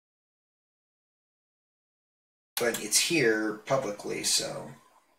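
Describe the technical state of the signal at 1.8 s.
At 1.8 s the signal sits inside an audio dropout to silence that is already under way when the clip begins and lasts until 2.57 s. The gap is silent with no room tone, likely from lost input while recording continued.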